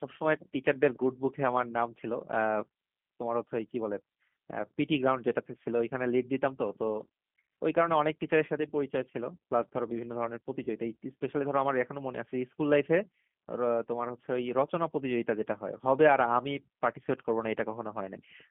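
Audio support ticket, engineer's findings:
G.729 codec across the whole call: rough, slightly synthetic timbre, band cut at about 150 Hz and 3.4 kHz, consistent with an 8 kbit/s G.729 stream. Damage plainly audible.

Packet loss concealed by the speech codec at 10.64 to 10.69 s: brief stretched, fading sound, decoder extrapolating pitch and filter across a gap that fits a single lost 20 ms packet.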